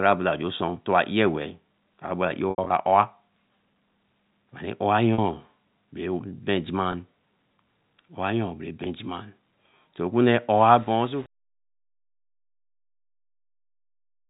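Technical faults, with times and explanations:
2.50–2.70 s, packet loss with pitch repetition: about 120 ms of audio went missing in scattered gaps, the longest 80 ms. The receiver filled each gap by looping the last pitch period, so the sound briefly holds with a buzzy quality and sags where the loop fades, then cross-fades back in.
5.14–5.18, 6.92–6.94, 8.84–8.86 s, packet loss with pitch repetition: single 40 ms and 20 ms losses, consistent with 20 ms packets, each bridged by a short repeated cycle that sounds like a slightly held tone.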